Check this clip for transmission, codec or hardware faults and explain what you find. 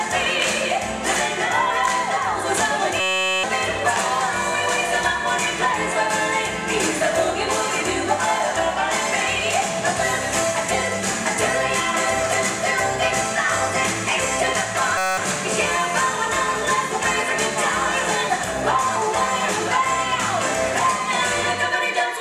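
Two system hang loops occur, at 3.00 to 3.44 s and 14.98 to 15.17 s. The system stalled while playback kept recycling one 5.33 ms slice, which fits a 256-sample buffer. Each sounds like a steady 188 Hz buzz, with roughly 0.4 s and 0.2 s of audio lost.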